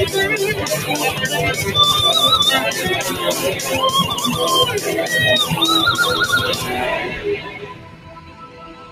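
From start to finish a noise suppressor meant for speech is acting on this sound. It treats sustained tones and ambience as noise, so level pumps by around 10 dB: attacks survive while held portions sink. The waveform envelope breathes, and spectrogram tails look chopped and patchy.

From 7.08 s to the end at 8.91 s, the sound is cut by the noise suppressor, dropping by up to about 8 dB over roughly a second and a half in total. Sustained and decaying material fades early. The waveform narrows, and spectrogram energy thins sharply after each onset.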